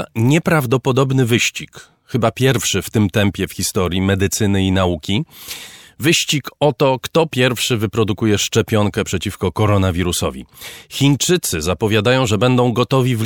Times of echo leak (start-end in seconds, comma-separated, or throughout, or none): none